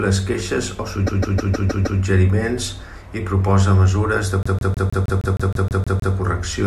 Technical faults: repeated frames

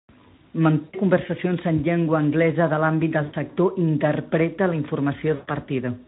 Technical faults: VoIP packet loss concealed by the speech codec

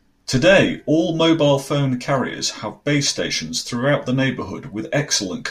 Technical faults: none

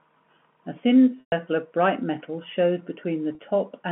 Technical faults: packet loss with pitch repetition

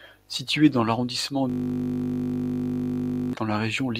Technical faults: system hang loop

